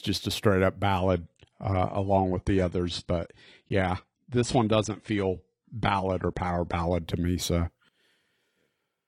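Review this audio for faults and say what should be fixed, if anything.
From 0.99 s, just after "just a straight up", until 6.99 s, just before "to me", the adaptive stream falls to a lower bitrate. Nothing remains above 10.2 kHz and codec artefacts thicken, which fits a step from 96 to 32 kbit/s AAC. Unlike a dropout, quality shifts instantly with no gap. A deeper playback buffer and a higher minimum rendition would prevent it.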